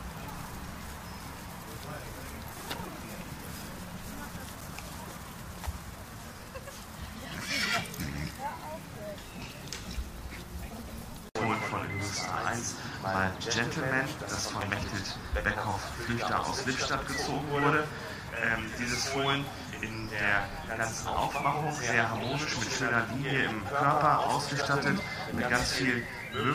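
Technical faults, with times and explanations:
4.61 s, 14.61 s and 24.62 s, gap between chunks: the audio was delivered in 10-second chunks, and about 6.5 ms of silence was left at each join. No sound is lost, but each join leaves a brief hard-edged hole that recurs at a steady 10-second interval.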